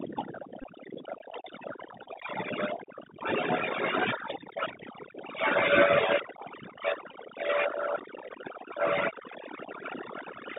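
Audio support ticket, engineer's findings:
Background pulled down and broken into twinkling specks. Probable component: overdone noise removal. Reduction set too strong, so frequency bands close to its noise estimate are cut hard or gated off, and quiet speech energy in those bands goes with the noise.

Narrow, boxy speech throughout, nothing heard above about 3.7 kHz or below about 150 Hz; scratchy s sounds, granular hiss under speech, distortion on loud high content. Probable component: Bluetooth CVSD headset codec, consistent with a 64 kbps one-bit delta stream whose adaptive step cannot keep up with fast, loud high-frequency movement.

Short buzzy bursts at 0.62–0.64 s, 2.04–2.08 s and 7.11 s. Probable component: Bluetooth headset packet repeated. Voice packets lost on the headset link and the last one decoded again. Bursts of about 19 ms and 15 ms fit four or five repeats at 3.75 ms, producing a buzz near 267 Hz until good packets resume.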